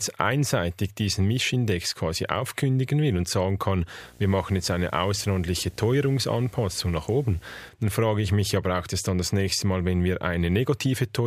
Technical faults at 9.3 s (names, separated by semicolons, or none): none